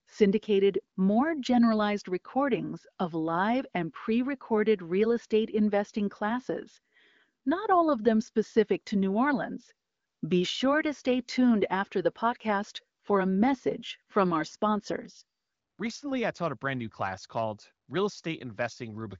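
Nothing stood out on listening to this speech, which carries the narrow top end of an AMR wideband (HD Voice) call, with nothing above about 7.4 kHz.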